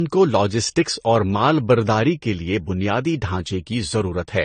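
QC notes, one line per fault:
throughout, transcoding between lossy codecs: the speech has nothing above 9 kHz and carries two overlapping kinds of smeared, swirly coding damage. This is likely repeated lossy encoding, fitting AAC-LC near 32 kbit/s re-encoded as Vorbis near 35 kbit/s.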